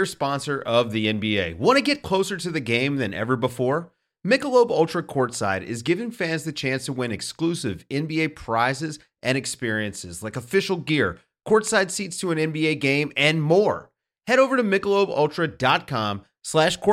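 No technical faults can be heard anywhere in this speech recording.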